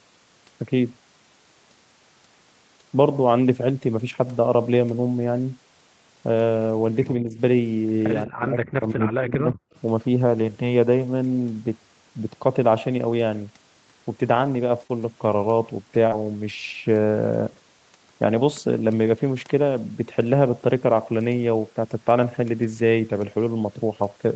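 Around 7.2 to 7.38 s there's a small dip of about 5 dB. Then from 8.25 to 9.56 s the level gets hammered, dropping by around 35 dB, with roughly a second of the talker chewed away in pieces. Both are most likely speech suppressed in double talk: the far end was talking too, and the echo canceller, unable to tell this talker from its own loudspeaker echo, turned everything down together.

Right after that, at 9.73 to 9.8 s, a faint scrap of echo leak slips through, sitting about 35 dB under the speech and arriving 183 ms late. The likely story is a speakerphone on the other side whose echo canceller didn't fully scrub what its microphone picked up, so a brief ghost of the voice comes back.

From 14.81 s onward there's a cluster of lost packets rebuilt from error correction, at 14.81, 14.89, 14.99, 15.31, 15.93, 16.11 and 16.49 s, each covering 20 ms. The decoder played the low-bitrate backup copies carried in the following packets, so there are no gaps, just short patches that sound grittier and noisier. 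The band here tops out at 8 kHz anyway, which fits Opus at around 32 kbps, so there's no extra top-end dip.

Twice the backup wasn't enough and you get short concealed packet loss. At 14.87 to 14.91 s about 20 ms went missing. From 16.07 to 16.13 s about 40 ms were lost. In both spots the receiver stretched the last sound to cover the hole before easing back into the real audio, so each one comes across as a quick smear or wobble.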